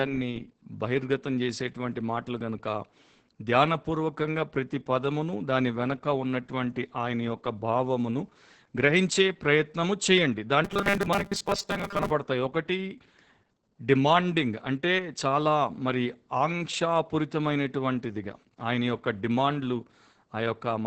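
Throughout, the speech carries Opus voice compression. Nothing is heard above 8 kHz, which fits wideband SILK coding. The excitation is coded coarsely, so the speech sounds muffled, hoarse and slightly robotic. The damage is heavy and points to a bitrate near 10 kbps.

From 10.65 to 12.11 s, robotic sound from repeated short buffers takes over. The speech turns into a rigid, metallic buzz at 200 Hz. That fits a 5 ms stretch likely being replayed while fresh audio arrives late. About half the real sound is lost.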